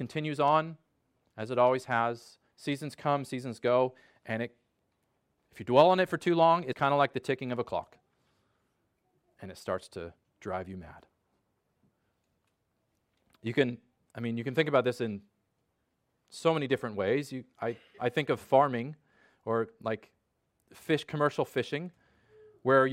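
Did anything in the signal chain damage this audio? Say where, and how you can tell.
Yes, at the codec stage: compressed frames were skipped at 6.71–6.73 s, between "it for too long" and "kind of like the". Roughly 70 ms of audio is missing, and the audio jumps ahead at the join. A spectrogram would show a brief vertical discontinuity where the harmonics jump abruptly.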